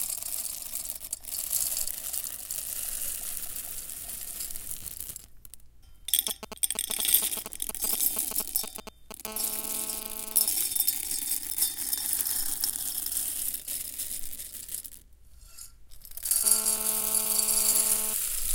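From 6.28 to 9.13 s come GSM signalling bursts: a nearby 2G phone sends short groups of radio pulses, and the audio circuit rectifies them into a galloping dit-dit-dit of brief 217 Hz buzzes, nearly as loud as the wanted sound. A spectrogram shows clustered vertical stripes. The waveform shows spiky packets.

GSM phone buzz follows from 9.25 to 10.46 s and returns from 16.44 to 18.14 s. The phone is now transmitting continuously at 217 bursts per second, and rectification turns this into a hard, raspy 217 Hz buzz, about 14 dB and then about 11 dB below the sound. A spectrogram shows an evenly spaced stack of harmonic lines. The waveform shows a regular pulse train.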